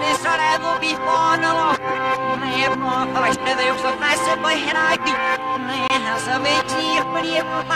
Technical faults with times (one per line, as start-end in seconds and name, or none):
5.88-5.90 gap between stream segments